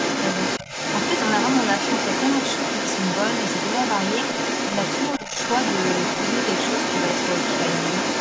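Speech recorded through a call's microphone chain, with content reaching up to 8 kHz, carries the other side's voice leaking through for the full clip, from 0.0 to 8.2 s. The far-end voice sits at roughly the same level as the talker, so it is not a faint background trace but a competing second voice. The likely cause is a loudspeaker on the talker's device feeding back into the microphone, with the echo canceller leaving a large residual. Speech suppressed in double talk appears twice, from 0.60 to 0.67 s and from 5.18 to 5.35 s, where the talker's level dips by around 10 dB for a fraction of a second. These brief holes likely come from the canceller clamping down while both voices overlap, attenuating the wanted speech together with the echo it cannot separate from it.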